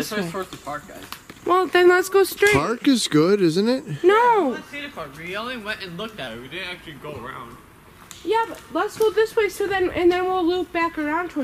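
From 6.27 to 7.90 s a wrong sample rate slows the sound to about 0.92 times its speed and drops its pitch by about 1.5 semitones, which fits 48 kHz material played at 44.1 kHz. Unlike a pitch shift or time-stretch, speed and pitch change together.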